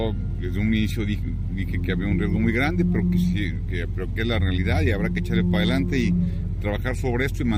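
No technical faults are audible anywhere in this audio.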